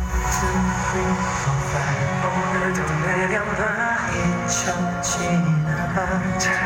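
Bus current drawn in 1 ms USB frames leaks into the ground, causing USB whine throughout: a fixed 1 kHz tone, loudest at 3 kHz, faint beneath the sound.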